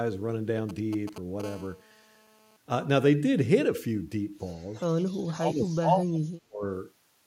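From 0.69 to 1.42 s, GSM signalling bursts from a nearby 2G phone break in as a galloping dit-dit-dit of brief 217 Hz buzz fragments, well below the speech. The phone transmits only short groups of radio bursts while signalling, and the audio circuitry rectifies them into sound.

At 1.44 s this turns into continuous GSM phone buzz that lasts until 2.57 s. It is a hard, raspy 217 Hz tone rich in harmonics, about 24 dB under the speech and unrelated to it. The phone is now transmitting steadily as in a call, so every burst is demodulated.

Between 5.23 and 6.63 s the speech dips and drops out in pieces for about one and a half seconds in total, falling by about 35 dB at its deepest. This is likely speech suppressed in double talk: with both sides speaking, the echo canceller could not tell the talker from loudspeaker echo and attenuated both.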